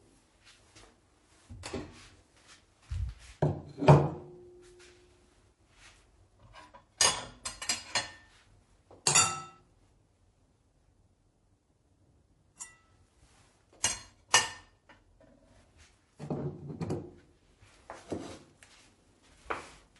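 Throughout the clip the sound carries the swirly, watery texture of MP3 compression, and the damage is plainly audible. Faint detail flickers in and out from one frame to the next, which fits an encoder running at around 48 kbps. That constant, frame-to-frame shimmer is what separates it from simple low-pass filtering, which would dull the sound evenly without any swirl. This is likely down to MP3 encoding.

From 13.80 to 13.83 s, a short burst of hiss arrives just ahead of a sharp attack and rises about 17 dB above the quiet before it. This is pre-echo. The codec spread its quantisation noise across a whole block, so noise sized for the loud onset leaked into the silent stretch in front of it. A second, stronger pre-echo follows from 14.31 to 14.34 s, about 22 dB up. Both smears last roughly 30 ms and sit only before the attack, not after, which distinguishes them from reverb or a real echo. 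Their length suggests the encoder never switched to short blocks and stayed on a window of about 48 ms.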